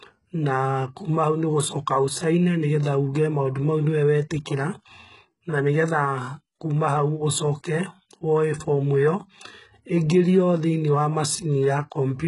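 From start to finish the speech carries heavy coding damage of the kind HE-AAC compression leaves, likely from a very low bitrate in the region of 12 kbps. Only the lower band is truly coded, so the treble is rebuilt from copied lower content: s sounds come out gritty, lispy and metallic, with harmonics that fail to line up. On a spectrogram the upper region looks smeared and blocky, and everything stops at a hard ceiling near 11.1 kHz.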